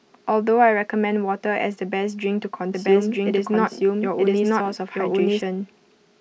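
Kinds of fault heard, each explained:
Doubled audio track: from about 2.73 s to 5.41 s the speech has a second full-band copy running about a second behind, at roughly the same loudness as the original. It's dry, with no decay or room colour. It cuts in and drops out abruptly rather than fading. The likely cause is the signal being captured twice, once through a slower path, or an edit leaving two copies sitting out of step.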